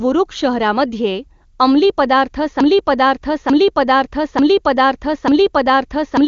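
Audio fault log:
2.61 s to end, broken-record loop: the player, encoder or stream likely stalled and kept resending the last fragment it held, so a 0.89 s slice of speech repeats exactly four times back to back, and the speech that should have followed is lost.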